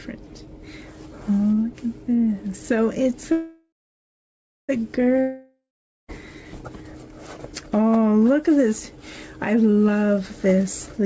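From 3.32 to 4.72 s there is a call audio freeze. The last sound carries on as a fading buzz, then nearly a second of silence, and the audio resumes exactly where it stopped. That points to packets likely held up and a drained jitter buffer, adding 1.37 s of delay rather than losing anything.

A long network dropout follows from 5.21 to 6.11 s. It opens with the same fading buzz and about half a second of silence. Unlike the freeze, the sound returns further along, with about 0.88 s of audio missing, as if packets likely never arrived at all.

From 10.56 to 11.03 s a jitter buffer speed-up runs the sound at 108% speed with its pitch unchanged. Short pitch-period slices totalling around 50 ms are cut to shrink the buffered delay, so it sounds hurried rather than broken by a gap. Throughout, the call path passes nothing above 8 kHz, which fits G.722 at 64 kbps.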